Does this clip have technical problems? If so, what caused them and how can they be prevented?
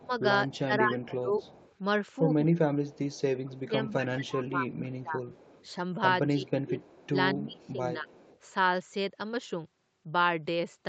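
Yes. Speech is suppressed in double talk at 0.0–1.35, 2.44–5.2 and 6.27–8.1 s, dipping in pieces by up to about 20–25 dB. The likely cause is an echo canceller ducking both sides during overlap. Full-duplex tuning and headsets prevent it.

Echo leak appears at 0.49–1.76, 2.54–3.48, 4.7–5.67, 6.79–7.09 and 7.67–8.39 s. A copy returns 230 ms late, about 25–30 dB down, likely from a loudspeaker echo the canceller missed. Headphones or better echo cancellation prevent it.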